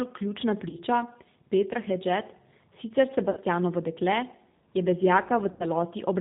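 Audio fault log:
Throughout: G.729 codec. The audio passes through an 8 kbit/s G.729A-style speech coder, which rebuilds each 10 ms frame from a vocal tract filter, a pitch predictor and a few fixed pulses, and passes nothing above 4 kHz. The damage is plainly audible: the speech sounds band-limited, slightly rough and synthetic, because the sparse pulse excitation and coarse filter cannot reproduce the fine detail and breathiness of the original.
0.69–0.78 s, 3.31–3.39 s, 5.52–5.65 s: VoIP packet loss concealed by the speech codec. About 40 ms, 60 ms and 80 ms of audio go missing in these three spots, which fits runs of two, three and four lost 20 ms packets. In each gap the decoder keeps repeating its last pitch and filter with falling gain, so the sound smears into a fading buzzy tone or coloured noise. Each frame is predicted from the one before it, so the speech stays weak and distorted briefly after packets resume.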